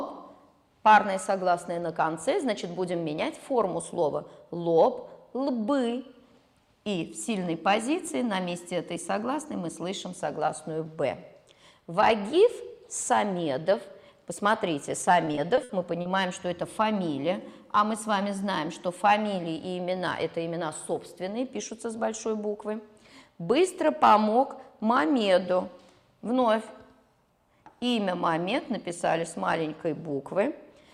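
Repeated packet loss hits the audio from 15.25 to 16.07 s: several packets in a row arrive late or not at all, and each hole, the longest about 60 ms, is patched by stretching the preceding sound. About a fifth of that stretch is filled this way, so it turns choppy and robotic, with pieces missing.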